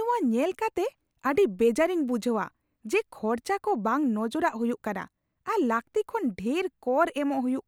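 Speech recording, with no technical faults audible anywhere in the clip.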